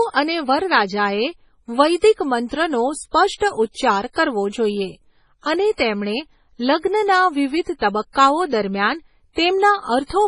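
From start to finish the speech carries heavy damage that is likely from MP3 compression at a very low bitrate, which fits roughly 24 kbps. Nothing is present above 10.5 kHz, where the encoder has cut the treble to save bits. Below that, weak frequency lines are dropped and restored from frame to frame, so the sound turns watery and swirly, sibilants come out smeared and metallic, and consonant onsets lose their sharpness.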